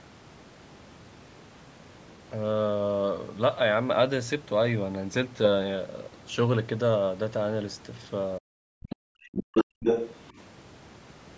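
From 8.39 to 9.74 s the speech gets pushed down in patches, about a second in total, at worst by about 40 dB. That's speech suppressed in double talk: both ends were talking at once, and the echo canceller likely couldn't tell the local talker from the loudspeaker echo, so it ducked everything. In and just after that stretch you also get the other side's voice leaking through. First there's a tiny blip at 8.91 s, well under the speech. Then from 9.23 to 9.64 s it's a bit louder than the talker, and from 9.80 to 10.29 s it sits about level with them. It's likely far-end audio from the loudspeaker that the canceller didn't fully strip out of the mic.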